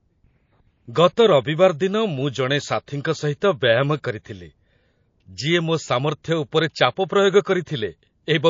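Throughout, the speech has a watery, swirly texture and dulled treble, likely from MP3 compression at a low bitrate near 32 kbps, with weak frequency components dropping in and out.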